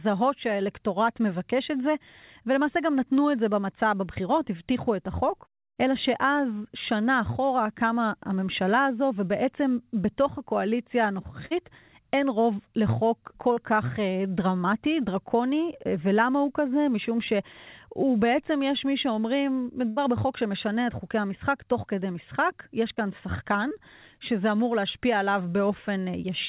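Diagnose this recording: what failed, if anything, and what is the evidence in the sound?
Short concealed packet loss on the network leg, heard as brief smears or wobbles at 4.14, 13.53, 22.94 and 23.69 s. The receiver covered gaps of about 20 to 40 ms by extending the last sound.

There's also a burst of packet loss at 11.46 to 11.61 s and 19.89 to 19.98 s. On this narrowband call path, with nothing above 4 kHz, the last sound holds and fades before the speech picks up further on, with a piece missing.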